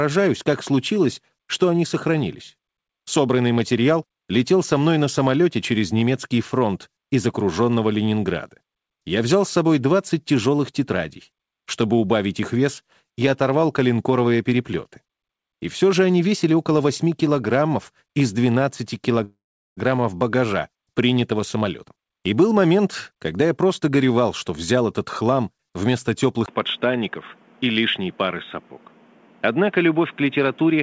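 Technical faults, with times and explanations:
19.24 to 19.79 s, call audio freeze: the last sound is stretched into a fading buzz, then about 0.4 s of silence, and the audio resumes exactly where it stopped. The likely cause is delayed packets draining the jitter buffer. Unlike a dropout, nothing is lost, but a 0.53 s gap is inserted.
21.32 to 25.51 s, jitter buffer speed-up: the sound runs at 112% speed with unchanged pitch, so it feels hurried. The receiver trims short pitch-period slices to shed the delay added just before, roughly half a second in total. Resampling would raise the pitch as well.
26.46 s to the end, input switched to a poorer device: after a 20 ms silence the bandwidth narrows from about 8 kHz to nothing above 3.8 kHz, and the sound turns dull and boxy. A new noise floor sits about 30 dB below the signal, with level about unchanged, likely from a different microphone.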